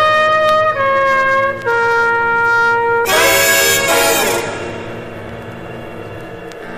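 Hard clipping runs through the whole clip. The signal arrives about 6 dB hotter than the stage can pass. Every peak that exceeds the limit is sliced off flat. Only a small share of the waveform goes over, around 3 percent of samples. Those flattened tops add harmonics high in the spectrum. The result is a crackle and gritty edge on each loud moment, with quieter passages left clean.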